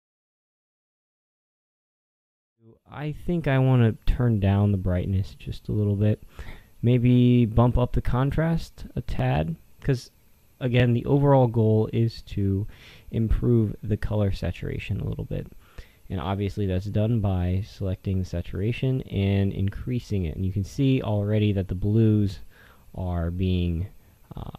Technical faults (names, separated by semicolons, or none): none